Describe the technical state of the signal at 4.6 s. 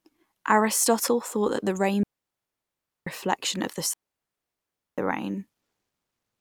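At 4.6 s the speech is silenced by a digital wireless dropout running from 3.94 to 4.98 s. The receiver lost too much data and muted for about 1.04 s, leaving a clean, near-silent hole with quick fades and none of the noise bursts an analogue RF dropout would produce.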